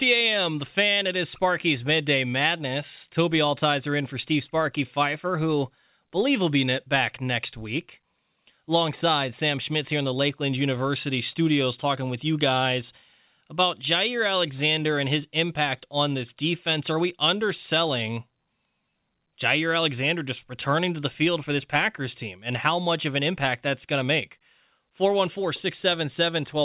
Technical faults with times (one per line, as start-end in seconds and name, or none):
none